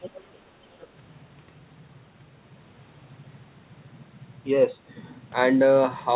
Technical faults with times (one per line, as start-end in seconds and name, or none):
0.01-0.34 other side's voice leaking through
0.74-0.86 other side's voice leaking through